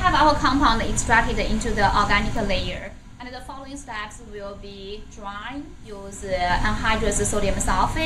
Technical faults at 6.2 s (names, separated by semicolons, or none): zipper noise